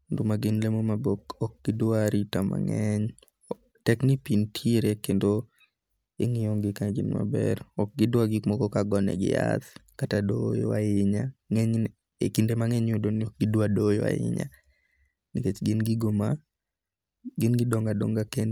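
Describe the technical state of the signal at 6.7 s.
At 6.7 s the speech signal is intact, with no audible technical fault at that moment.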